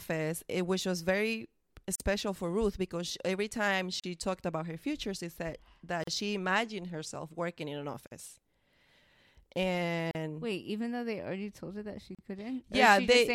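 Short dropouts of about 38 to 44 ms cut the speech every 2.0 s, at 1.95 s (after "which was very"), 4.00, 6.04, 8.07 (after "herself working in an"), 10.11 and 12.15 s (after "told her that she"). These are gaps at the joins of encoded pieces: separately encoded 2 s segments were joined with their start-up delay and final-frame padding left in, leaving brief, smeared silences before the speech resumes where it stopped.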